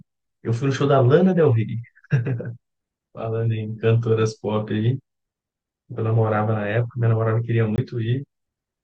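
At 7.76 to 7.78 s the speech drops into a block of digital silence: a 20 ms run of samples replaced by zeros. The signal cuts out and returns with no fade, and the gap sounds like a brief hole.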